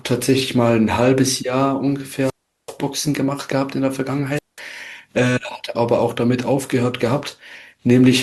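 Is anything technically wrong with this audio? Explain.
Yes, there's a wireless microphone squelch dropout, twice: 2.19 to 2.77 s, then 4.35 to 4.60 s. The radio link fades, hiss rises briefly, and the receiver's squelch mutes everything, about 385 ms of near silence the first time and 193 ms the second, before the speech comes back.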